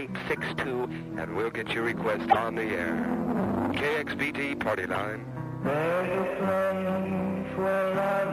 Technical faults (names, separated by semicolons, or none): MP3 compression; corrupt frame decoded